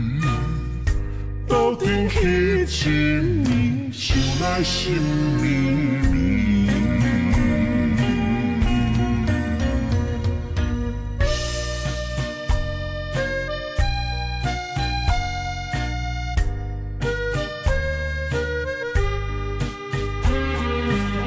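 Wrong sample rate, present from start to finish: the audio is being played back more slowly than it was captured, with no rate conversion in between. Timing and pitch therefore drop together by the same ratio. Everything runs at about 0.73 times its proper speed and sits roughly 5.5 semitones low, giving a heavy, dragging quality. The ratio fits material recorded at 22 kHz being played at 16 kHz.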